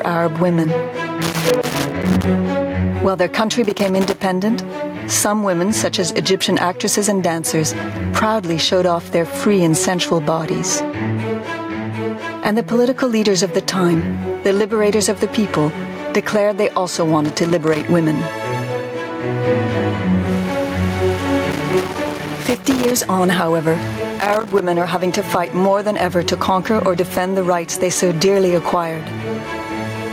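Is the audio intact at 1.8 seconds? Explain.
No. Loose connector crackle runs from 1.22 to 2.24 s, so 1.8 s sits in the middle of it. A worn or dirty contact in the signal path is making and breaking as it shifts, chopping the signal on and off in rapid, uneven bursts. Any DC on the line turns each break into a pop, so the moment sounds like irregular scratching and crackle riding over the audio.

Gain pumping is also present at 1.8 s, as it is through the whole clip. The level heaves by about 15 dB, which squashes loud and soft parts toward the same level. The likely cause is input gain set far too high for the microphone, with a fast limiter or compressor clamping down on every peak.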